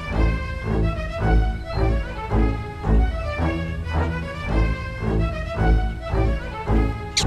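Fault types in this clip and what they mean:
No technical faults can be heard anywhere in the signal; it carries no audible disturbances, interruptions or level problems.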